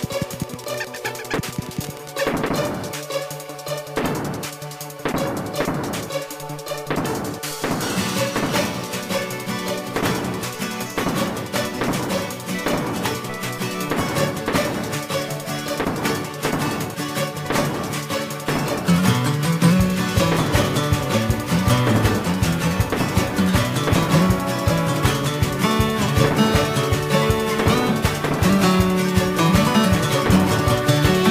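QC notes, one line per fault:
0.00 to 2.24 s, Wi-Fi interference: you'll hear a steady tick repeating about every 102.4 ms, so close to ten a second, sitting roughly 25 dB under the wanted sound. That spacing is the giveaway for a Wi-Fi beacon. A radio was close enough to the audio circuit that its bursts got rectified into the signal path, and each beacon transmission comes through as a little click. It clears up after the first couple of seconds.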